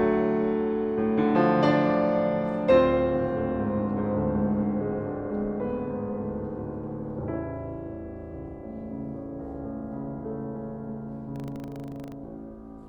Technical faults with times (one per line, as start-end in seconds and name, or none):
11.32-12.14 buffer tearing